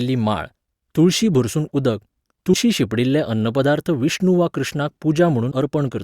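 At 2.53 to 2.56 s, between "माळ तुळशी भरसून उदक" and "शिंपडिल्ले अन्नपदार्थ विष्णू वा", and again at 5.51 s after "अन्नपदार्थ विष्णू वा कृष्णाक", compressed frames are skipped. The speech leaps ahead by about a tenth of a second, then somewhat less, which fits a handful of 20 ms frames going missing. Unlike a dropout, there is no silent gap; the speech simply jumps ahead where the missing frames would have been.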